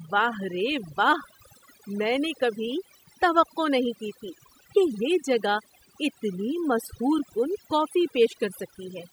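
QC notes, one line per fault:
Throughout: overdone noise removal. The noise reduction was pushed too hard, so any frequency band sitting close to the estimated noise floor gets pulled far down or switched off entirely. The quieter parts of the speech fall into that range and are cut along with the noise. Between phrases the background sinks to near silence scattered with twinkling specks, and the voice has its softer detail stripped away.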